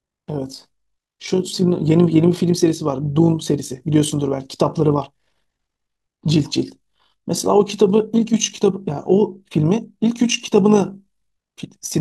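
The processing chain split the audio into windowed frames and reassembled them with an overlap whose windows do not add up to a constant gain, so the overlap-add ripple runs through the whole speech clip. Level swells and dips once per frame, about 6 dB deep, at a rate of around 50 Hz. That fast periodic modulation rides on every syllable as a buzzy flutter, giving the voice a rough tremolo from start to finish.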